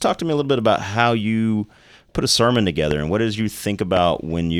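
Loud pops at 2.91 to 2.93 s, after "you put a sermon", and at 3.97 to 3.99 s, after "and what does you", each a single sharp click peaking about 10 dB above the speech, which carries on underneath. A brief electrical pulse, likely from a switch, static or a driver glitch, entered the signal chain.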